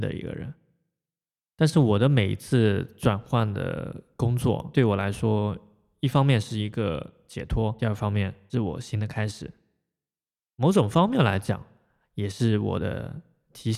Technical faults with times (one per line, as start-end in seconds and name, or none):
none